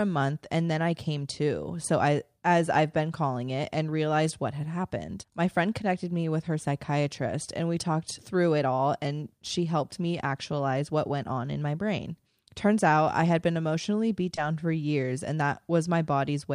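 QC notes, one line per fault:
14.35–14.38 s, short concealed packet loss: right after "had been emotionally beat" and before "for years and", about 20 ms of missing speech is filled by extending the preceding sound, leaving a brief smear rather than silence or a hard click.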